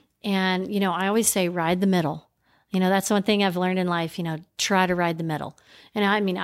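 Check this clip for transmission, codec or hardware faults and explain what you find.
The speech signal arrives intact and continuous, with its level, timing and tonal balance holding steady across the whole recording.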